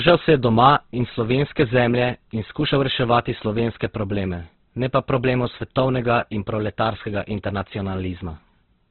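Right from the start and all the way through, there's a steady buzz at 100 Hz riding on the speech. That's a block size mismatch (truncated): one stage hands over slightly longer blocks than the next stage reads, so the tail of every block gets chopped off. Those regular cuts, a hundred times a second, are what make the buzz. The size difference is small enough that the speech runs at its normal speed and pitch.

Also throughout, the speech sounds rough, grainy and noisy, and everything is boxed in with nothing above about 4.2 kHz, giving that narrowband, telephone-ish dullness. The damage is heavy. That combination is likely Opus compression squeezed to a very low bitrate, around 12 kbps, still in its music-style coding. Rather than leaving holes, it fills the starved bands with folded or noise-like content, hence the graininess instead of swirl.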